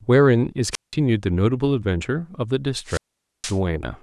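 At 0.71 s and again at 2.84 s, a wireless microphone squelch dropout: the radio link fades, hiss swells, then the receiver mutes for 178 ms and later 469 ms. The spectrogram shows a broadband noise smear before each blank gap; the waveform flatlines until speech resumes at 0.94 s and 3.58 s.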